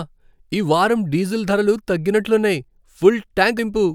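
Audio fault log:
3.58 s compressed frames skipped. The speech jumps ahead by roughly 70 ms, which fits about three lost frames of around 23 ms each.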